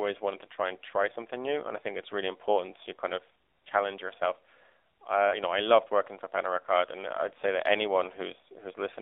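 From start to end, AMR narrowband mobile codec damage is plainly audible. Nothing passes outside roughly 300 Hz to 3.7 kHz. The buzzy, synthetic tone fits a low 7.4 kbps mode.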